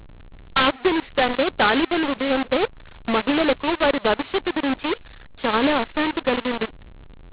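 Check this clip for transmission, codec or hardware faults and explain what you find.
There is one fault, present throughout: mu-law and A-law mixed up. The speech was coded with G.711 A-law but decoded as mu-law, so every 8-bit code maps to the wrong level. The result is harsh, distorted speech with hiss filling the pauses. On a waveform the silences sit well above zero, and a spectrogram shows broadband noise smeared across the band up to the 4 kHz telephone limit.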